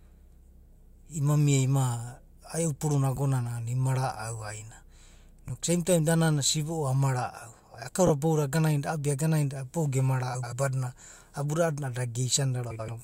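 Frames out of order at 3.16–3.18, 5.47–5.50, 8.07–8.10, 10.34–10.53 and 12.70–12.88 s. Neighbouring frame runs were swapped, producing garbled flutter. Unlike a dropout, no time goes missing.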